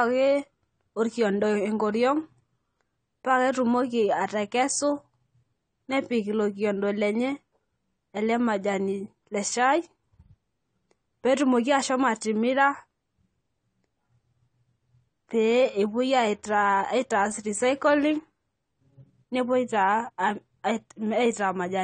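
Throughout the speech, nothing is heard above 9 kHz, and the sound is dull and smeared, with a warbling, fizzy texture on sibilants and held vowels. The likely cause is AAC compression at a low bitrate, consistent with 32 kbps AAC-LC discarding high bands and coarsely quantising the rest.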